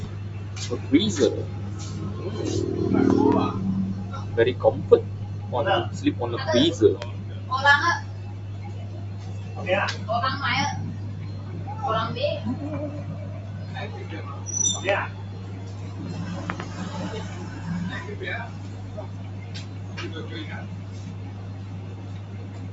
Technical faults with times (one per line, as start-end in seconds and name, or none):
0.00-22.72 noise suppressor applied to music or sounds
3.10-3.34 loud pop
7.02-7.04 loud pop
14.89-14.91 loud pop
16.50-16.62 loud pop